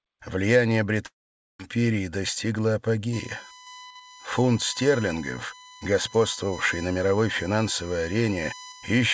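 From 1.06 to 1.61 s there is a long network dropout, likely from packets that never arrived. The receiver stretches the last sound into a fading buzz before near-silence. About 0.54 s is lost. On a waveform the envelope decays into a flat gap, then resumes abruptly.

From 3.13 s to the end, USB whine sits underneath the audio: a fixed-pitch tone built on 1 kHz, with its strongest harmonic at 14 kHz, only about 15 dB below the signal. It comes from bus-frame current leaking into power or ground. A spectrogram shows evenly spaced horizontal lines.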